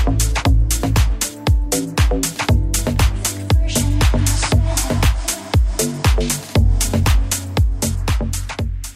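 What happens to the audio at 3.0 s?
Nothing goes wrong at 3.0 s; the audio plays through that moment intact.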